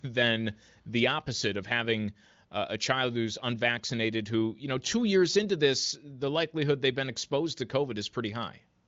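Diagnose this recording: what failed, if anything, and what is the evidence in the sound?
Nothing here failed; the speech comes through a wideband call path with the top end stopping around 7.5 kHz, which fits the AMR wideband (HD Voice) codec running at a high rate where it stays clear rather than raspy.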